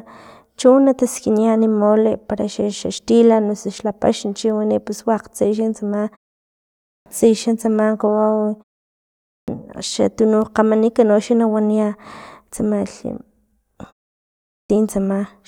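At 6.63, 9.09 and 14.28 s, speech bursts abruptly out of half-second pauses missing about 0.4 s of its opening: a clipped start after a pause, as the sleeping output device wakes late.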